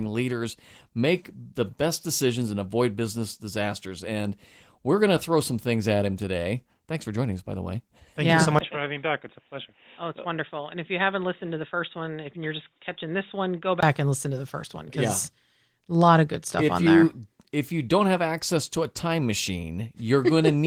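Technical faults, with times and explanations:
8.59 to 13.83 s, likely an input switched to a poorer device: after a brief 20 ms gap the sound falls about 10 dB, turns boxy with nothing above 3.8 kHz, and gains a faint new hiss roughly 50 dB down, then clears again.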